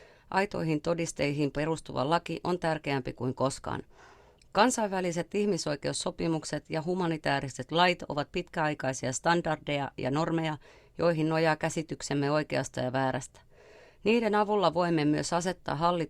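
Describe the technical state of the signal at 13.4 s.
At 13.4 s the speech signal is intact, with no dropout, clipping, distortion or other audible fault.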